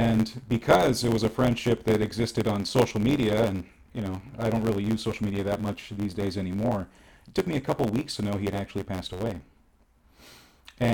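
Block size mismatch (truncated) runs through the whole speech clip: one stage writes longer blocks than the next reads, so each block's tail is discarded. This leaves a buzz near 92 Hz, which fits 512-sample blocks, and speech running 1.07 times fast at near-normal pitch.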